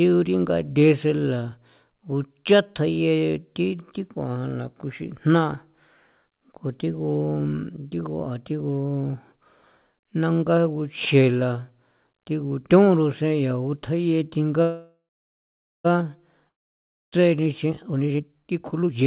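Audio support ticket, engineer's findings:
Call audio freeze, 14.62–15.86 s. Packets likely held in transit, jitter buffer underran. Last sound stretched into a fading buzz, then about 0.85 s of silence. Playback resumes where it stopped: 1.22 s gap inserted, nothing lost, delay now 1.22 s longer.

Long network dropout, 16.48–17.22 s. Audio likely lost in transit for 0.64 s and never played. Brief decaying fill, then 0.62 s of silence. Sound returns further along, with that 0.64 s of content missing.

Jitter buffer speed-up, 17.44–19.06 s. The buffer ran above target and trimmed pitch-period-sized chunks repeatedly, roughly 0.7 s in total. Speech plays at 148% speed with unchanged pitch and sounds rushed. Nothing above 4 kHz throughout, consistent with a G.711 mu-law call path.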